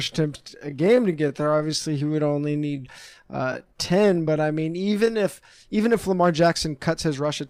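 From the very start up to about 5.24 s there's a time-stretched section, where the speech plays at roughly 0.71 times its normal pace but the pitch doesn't drop. That's most likely software stretching the audio to fill a longer slot by repeating short slices, which makes it drag. Right at "even if" the pace snaps back to normal, so the change in speed is abrupt.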